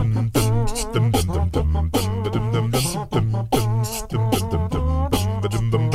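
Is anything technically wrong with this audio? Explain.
No, nothing in this audio points to a technical fault: the signal holds steady throughout, with no dropouts, level problems or added disturbances to single out.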